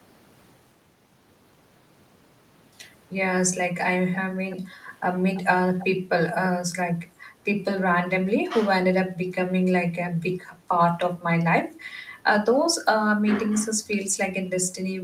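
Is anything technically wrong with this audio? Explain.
Yes. Echo leak appears at 4.13 to 4.18, 4.50 to 4.56, 5.34 to 5.41 and 5.79 to 5.86 s. Brief scraps of the speech return 333 ms late, roughly 15 to 25 dB quieter, likely because a far-end loudspeaker's echo canceller let part of its microphone pickup through.

Background gated by the echo canceller occurs at 7.07 to 7.41 s and 10.55 to 10.68 s. The canceller pulled the microphone down while its loudspeaker played, so the room sound dips about 7 dB and then about 8 dB before recovering.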